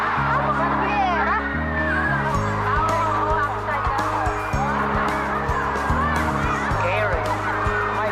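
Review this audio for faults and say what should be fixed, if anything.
No faults; nothing needs fixing.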